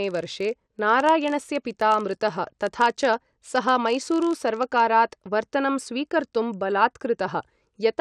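From 0.0 s to about 4.88 s the speech carries a buzz near 46.9 Hz, the sign of a filter restarted on every block. The filter drops its stored state at each block boundary and begins again from silence, so every block opens with a small transient; the repetition rate fits a 1024-sample block. Unlike mains hum, this buzz rises and falls with the speech level and vanishes when the signal is quiet.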